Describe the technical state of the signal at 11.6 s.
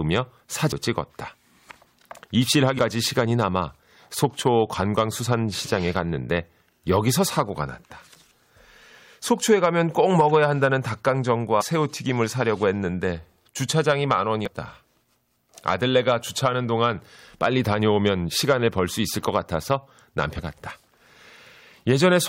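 Damaged data in the compressed stream corrupts the data from 11.58 to 11.62 s. The decoder misreads it, loses sync and hunts for the next valid frame header, leaving a brief glitch of about 40 ms cutting into the sound.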